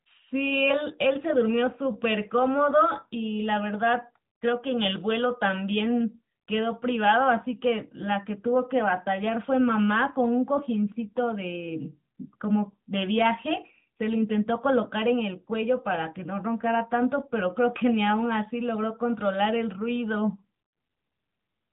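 From start to finish the speech carries AMR narrowband mobile codec damage: everything above 3.8 kHz is gone, and the voice sounds plainly buzzy and synthetic, which fits a mid-rate mode near 10 kbps. A spectrogram shows a flat ceiling at 3.8 kHz.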